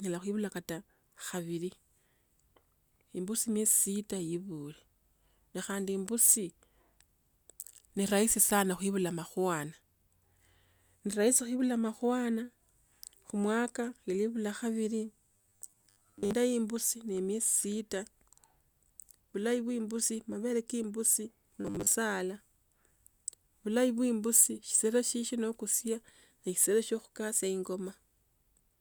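From 15.32 to 16.35 s, and again briefly from 21.61 to 21.95 s, the speech collapses into robotic sound from repeated short buffers: a rigid, metallic buzz at 100 Hz that still loosely tracks the words. Most of the first stretch and about half of the second is repeated material, likely from audio arriving too seldom while a 10 ms buffer is replayed. A spectrogram shows evenly spaced horizontal bands every 100 Hz, and the waveform shows identical 10 ms cycles.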